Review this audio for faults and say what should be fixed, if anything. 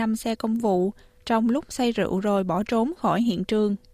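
Nothing in this recording needs fixing, as no faults can be heard anywhere in it. No correction or change to the signal chain is called for.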